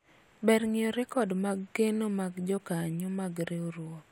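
No technical faults can be heard in this recording.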